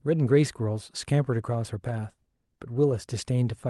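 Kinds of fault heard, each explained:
Nothing here counts as a fault; the speech just came through a normal Opus call path, which tops out around 12 kHz as you'd expect.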